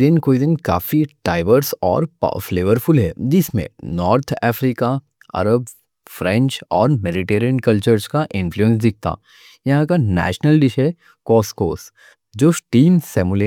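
Speech recording with no technical faults detected anywhere in the clip.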